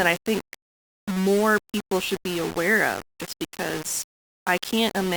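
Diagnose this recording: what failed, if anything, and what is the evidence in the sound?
Low bit depth without dither, likely sample-format conversion rounding to 5 bits: gritty distortion follows the speech throughout; waveform shows stair steps, spectrogram grain tracking each syllable.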